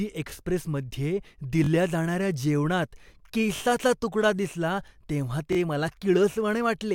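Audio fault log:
0.30–0.32 s, 1.64–1.69 s, 3.56–3.61 s, 5.53–5.57 s: repeated buffer. Fresh audio arrived late, so the last 21 ms chunk played again, once at the first spot and twice at the others. That gives quick stutters with hard joins. The chunk length fits a 1024-sample buffer, and nothing seems lost.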